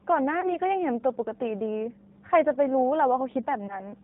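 Throughout, the speech sounds slightly rough and synthetic, with nothing above 4 kHz and plainly audible codec damage. This is the G.729 codec at 8 kbit/s, which rebuilds each 10 ms frame from a vocal tract filter, a pitch predictor and a few pulses.

From 0.41 to 0.50 s and again from 3.67 to 3.82 s, the sound smears into a brief buzzy tone or coloured noise that fades, and then stays weak or distorted after it. This is VoIP packet loss concealed by the speech codec. In each case about 20 ms of audio went missing, which fits a single lost packet. The decoder filled the gap by extrapolating from its last pitch and filter, and because each frame builds on the one before, the distortion carries on past the gap itself.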